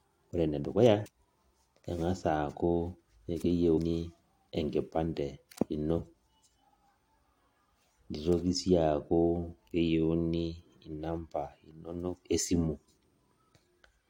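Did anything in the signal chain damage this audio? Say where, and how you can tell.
Yes. Two brief glitches cut into the speech at 1.05 s and 3.76 s, each under 20 ms. The cause is damaged data in a compressed stream: corrupted bytes at the codec stage made the decoder misread those frames and lose sync until the next valid frame header.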